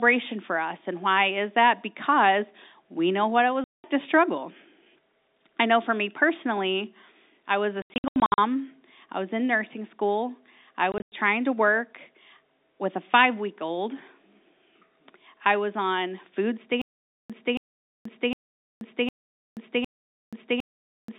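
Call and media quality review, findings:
Packet loss filled with silence, 3.64–3.84 s, 7.82–8.38 s, 10.92–11.12 s: hard-edged holes sized in 20 ms packet steps, nothing replayed.

Stutter with silent gaps, 16.82 s to end: same 0.28 s fragment returns every 0.76 s, 0.48 s silence between. Likely player stall retrying, not random loss.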